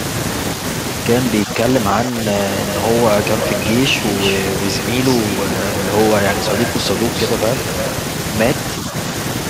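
Running under the whole speech clip are converter idle tones: the delta-sigma converter has no dither, so on quiet input it settles into repeating bit patterns that whistle. Here that's a faint, thin tone somewhere around 4 kHz, sitting about 26 dB below the speech. You catch it most in the gaps between phrases and as a grainy edge under the softer syllables.

Also present the whole way through is a filter restarted on every block. Something in the chain is throwing away its state and starting each block from zero, so every block opens with a tiny click. Those clicks repeat at 200 Hz, which points to blocks of 5 ms, and they fuse into a low buzz that rises and falls with the level of the speech rather than sitting at a constant hum.

From 1.45 to 1.5 s, 1.93 to 2.18 s and 2.43 to 2.47 s the talker dips. This is likely speech suppressed in double talk, with the echo canceller ducking the near end because the far side was talking at the same moment. 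The short ones are shallow, roughly 5 dB. The one near 2 s goes to roughly 10 dB and lasts about a tenth of a second or a bit more, so it sounds like the voice briefly sinking. A last shallow dip of the same kind turns up at 8.9 to 8.94 s.

Between 3.39 and 3.67 s, and again from 6.32 to 6.69 s, a delayed copy of the voice comes back 347 ms late. That's likely echo leak: a loudspeaker at the other end and a canceller that didn't fully remove it. The first return is fairly strong, only about 5 dB under the speech. The second is weaker at roughly 10 dB down, and both sound like a repeat trailing behind.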